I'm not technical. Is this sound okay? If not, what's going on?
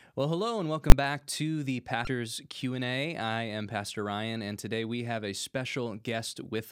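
No. At 0.90 s, a calculation produced invalid numbers at full scale, pinning the sound at one extreme value for a split second and causing one sharp bang.

Two devices likely ran on slightly mismatched clocks, causing clock drift buffer slips: a few samples dropped or repeated about every 1.7 s from 1.04 s to 6.04 s, heard as regular clicks.

From 2.04 s to 2.07 s, damaged data in a compressed stream confused the decoder, which briefly lost its place and produced a short chirp or blip.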